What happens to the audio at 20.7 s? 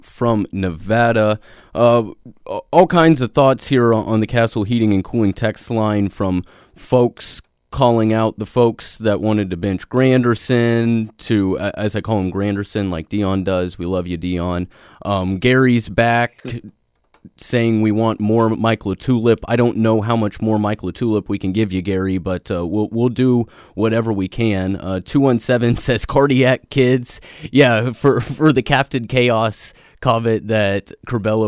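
Nothing goes wrong at 20.7 s; the speech carries straight through that moment with no dropout, click, distortion or other break in the signal.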